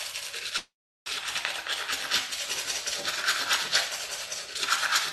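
An everyday sound recording carried over a call link. At 0.57 s the sound stalls. It is extended briefly, then fades to silence for about 0.37 s. At 1.08 s it resumes where it stopped, with nothing lost. This call audio freeze is likely jitter buffer underrun from delayed packets.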